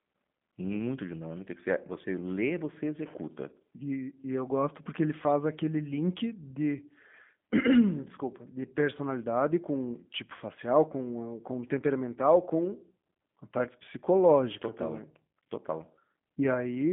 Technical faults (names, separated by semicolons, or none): G.729 codec